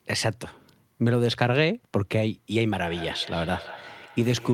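From 2.9 s to the end at 4.54 s, the speech comes back at itself in quick repeats, roughly every 150 ms, peaking at about 17 dB below the direct speech. This is feedback echo between two devices: a second device on the same call in the room plays out this microphone's audio, and the microphone captures it again. The local echo canceller removes only its own device's playback, so the returned sound passes through and keeps circulating.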